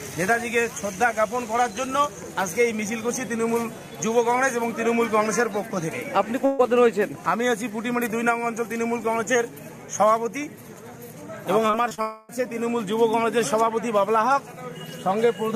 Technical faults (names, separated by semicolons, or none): burst of packet loss; repeated packet loss (robotic sound); long network dropout